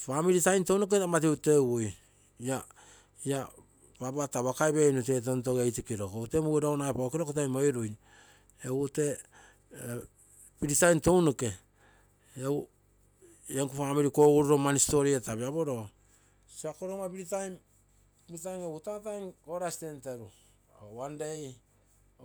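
No technical faults are audible anywhere in the recording.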